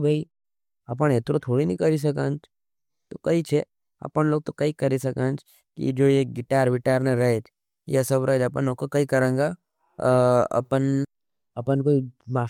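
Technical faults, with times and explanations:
No technical faults can be heard anywhere in this speech recording.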